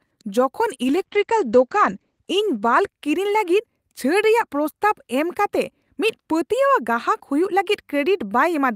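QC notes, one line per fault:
0.85–3.99 s, call bitrate drop: the top end collapses from a 20 kHz to an 8 kHz cut-off and the speech turns coarse and watery, worst for about 1.3 s, which fits the encoder falling from 48 to 12 kbps after a bandwidth-estimate dip.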